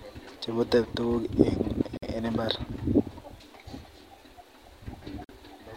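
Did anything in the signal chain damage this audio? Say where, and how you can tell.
Yes. Two brief dropouts break the speech, one from 1.97 to 2.03 s lasting about 52 ms and another from 5.24 to 5.29 s lasting about 47 ms. In each, the sound stops abruptly, the edges softened, and then resumes exactly where it left off. That is a gap at a join of encoded pieces, a codec-stage fault: separately encoded segments were spliced untrimmed, so each encoder's start-up delay and final-frame padding remain as silence.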